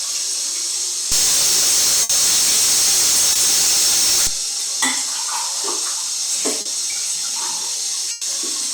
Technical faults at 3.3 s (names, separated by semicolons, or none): stuck bit; short concealed packet loss